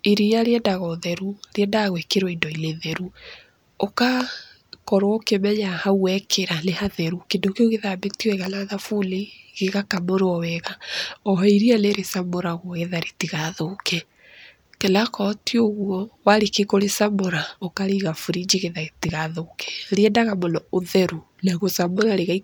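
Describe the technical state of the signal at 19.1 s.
Just after "kũrĩcamũra ũkarĩiga burinji getha", a loud pop occupies 19.04 to 19.11 s: two sharp thumps in quick succession, peaking roughly 10 dB above the speech. The likely cause is a sudden voltage pulse, from a plug, switch, static or driver glitch, which the downstream circuits shape into a brief thud. Unlike a dropout or buffer glitch, nothing is removed: the speech carries on underneath the thumps.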